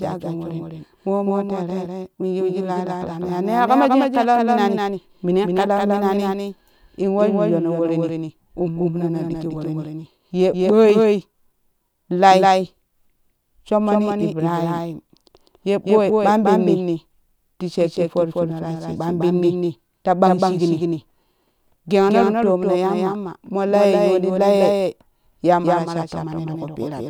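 From start to finish, every syllable is followed by a second, slightly quieter copy of itself, trailing by about a fifth of a second and sitting roughly 5 dB below the original. The echo is full-band and dry, with no decay or room colour, giving a stuttering, slapback quality to the speech. This is a doubled audio track, likely caused by the same signal being captured twice, once through a slower path.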